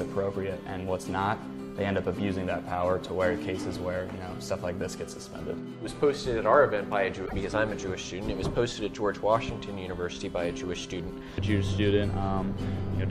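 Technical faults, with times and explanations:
7.25–7.33 s, broken MP3 bit reservoir: a brief garbled glitch of about 80 ms, spanning roughly three frames of about 26 ms each. The likely cause is a gap in the stream, leaving the next frames to decode borrowed bytes that belong elsewhere.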